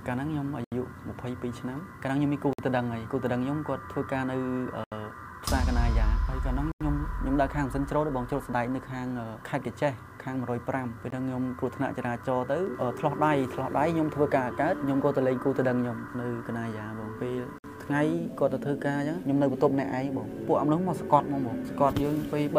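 The sound drops to dead silence six times: at 0.64 s for 75 ms, 2.53 s for 54 ms, 4.84 s for 78 ms, 6.72 s for 90 ms, 11.10 s for a brief 19 ms, and 17.58 s for 56 ms. Each gap is likely a Bluetooth stall, where held-up radio packets let the receiving buffer run empty until delivery caught up. On a waveform each appears as a flat line with abrupt edges. On a spectrogram it is a clean vertical blank band spanning all frequencies.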